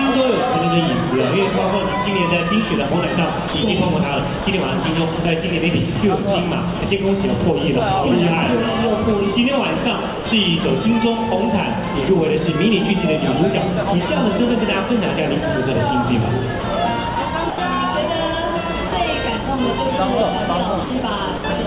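Short stretches of sound drop out to steady comfort noise at 3.48–3.54, 4.44–4.46, 5.16–5.18, 6.80–6.82 and 10.14–10.26 s. Each is likely sound dropped by the voice detector, which treated it as background and stopped sending.

From 16.60 to 17.58 s the sound turns choppy, with about 140 ms in total replaced by comfort noise. This is likely sound chopped by the voice detector as it switched sending on and off repeatedly.

A further 40 ms dropout follows at 18.88–18.92 s.

Between 20.84 and 21.44 s the sound is chopped again, with about 120 ms replaced.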